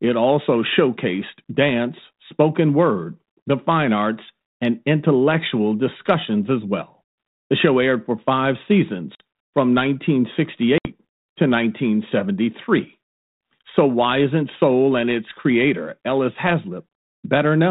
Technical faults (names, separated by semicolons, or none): packet loss on an ADPCM call